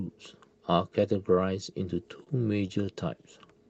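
From about 2.03 to 2.89 s there's a burst of repeated stalls (stutter): the jitter buffer kept running dry, so the receiver stretched the last sound across six short gaps, the longest around 29 ms. Nothing's actually lost, but that stretch drags and hiccups, all through a call path with a top end around 8 kHz.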